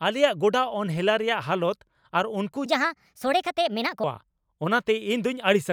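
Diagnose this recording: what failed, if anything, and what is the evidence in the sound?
From 2.66 to 4.04 s the speech turns suddenly high and hurried, jumping up by about five semitones while the pace quickens, then drops back to normal pitch and tempo once the section ends. That is a section at the wrong speed: the segment runs at 1.34 times its recorded rate, so pitch and duration shift together with no attempt at correction. The likely cause is a playback or editing stage resampling that stretch against a mismatched clock.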